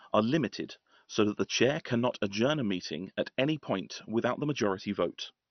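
Speech that sounds dull and gurgling from start to finish, with nothing above about 6.2 kHz and a coarse, granular texture. This is MP2 compression, likely at a starved rate near 48 kbps: the coder's sub-bands run short of bits, so the upper ones are switched off and the rest are quantised roughly. Unlike a plain low-pass filter, the damage is grainy rather than merely muffled.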